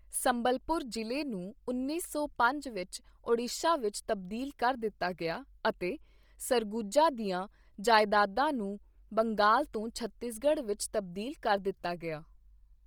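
Speech runs with Bluetooth LC3 compression damage from start to end, heavy throughout: the upper spectrum sounds hollowed out and refilled with hiss, giving the voice a breathy, grainy edge. On a spectrogram the high band would show patchy, noise-textured blocks in place of harmonic detail, repeating on a 10 ms grid, while the waveform envelope stays intact. The degree of damage points to a low bitrate near 32 kbps, likely from an LE Audio link.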